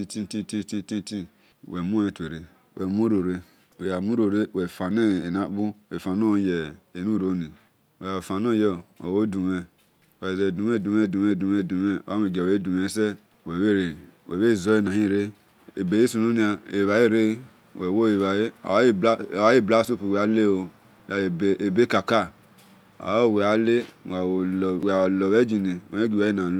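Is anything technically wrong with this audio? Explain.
Yes. Audio missing between chunks: brief skips of roughly 20 ms at 4.91, 14.87 (just before "hire ebeghisununia ebhale"), 19.85 and 24.83 s, on a 5-second grid, likely lost while chunks were switched. The waveform shows abrupt splice steps.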